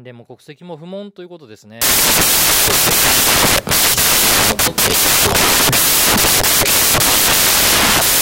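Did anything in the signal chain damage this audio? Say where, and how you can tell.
Yes. From 1.82 s to the end of the speech, samples built from the wrong bytes turn the sound into loud broadband noise. This is a sample-format conversion fault: bytes misassembled, low bits becoming dominant. A spectrogram shows energy smeared across all frequencies, and the waveform becomes dense, noise-like fill.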